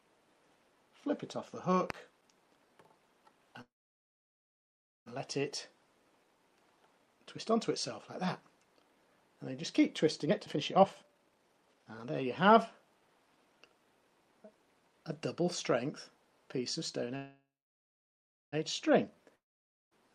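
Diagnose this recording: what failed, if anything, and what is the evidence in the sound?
A loud pop at 1.90 s, a single sharp transient about 15 dB above the surrounding audio, points to the analogue wiring or the converter input. The likely cause is a voltage step from a plug, switch or static discharge, shaped by the circuitry that follows. The sound carries on unbroken beneath it, which separates it from a network fault: nothing is lost or delayed. It is one event, not a pair or a repeated click.

A call audio freeze occurs twice, once from 3.61 to 5.08 s and again from 17.16 to 18.54 s. In each, the last sound continues briefly and decays into roughly 1.4 s and 1.1 s of near-silence. The audio then resumes exactly where it halted, with nothing skipped. This is a network-stage problem: packets were likely held up and the jitter buffer ran dry. What sets this apart from a dropout is that the audio was delayed by about 1.45 s and 1.36 s rather than lost.

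A jitter buffer speed-up runs from 10.25 to 13.75 s. The audio plays at about 141% speed with its pitch unchanged, so it sounds hurried but not chipmunk-like. The receiver was cutting out short pitch-period segments in rapid succession to drain excess buffered audio, removing about one and a half seconds in total. The unchanged pitch distinguishes it from a sample-rate mismatch in playback.

A long network dropout spans 19.36 to 19.93 s. The sound fades into about 0.53 s of silence, and when the audio returns it has jumped ahead, with roughly 0.56 s never played. The gap resembles the freezes, but here the audio after it does not pick up where it stopped. Packets were likely lost outright in the network rather than merely delayed.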